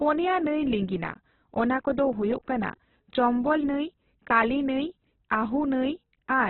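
From start to finish the speech sounds narrow and grainy, with nothing above about 4.1 kHz and a rough, noisy texture on voiced sounds. That's likely Opus compression in its CELT music mode, squeezed hard enough to suggest something near 8 kbps, filling starved bands with noise.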